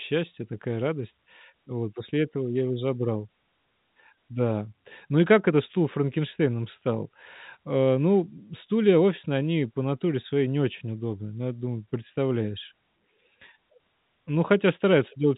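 Speech over a telephone line, with no faults audible.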